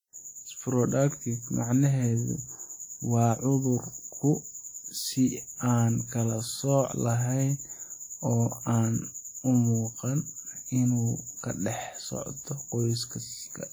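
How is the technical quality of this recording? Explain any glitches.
The speech has plainly audible codec damage from start to finish. It points to WMA compression, likely at a low bitrate, around 48 kbps. Long transform blocks smear quantisation noise over tens of milliseconds. The speech sounds ringing and washy, with hiss that breathes with it.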